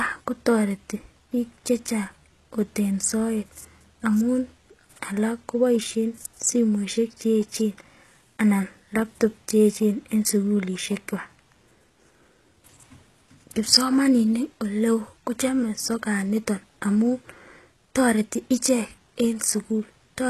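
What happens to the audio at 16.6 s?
At 16.6 s, as throughout, the speech carries HE-AAC compression damage, likely from a stream around 16 kbps: bright but copied-up treble ending at 12.3 kHz makes sibilants gritty and metallic rather than dull.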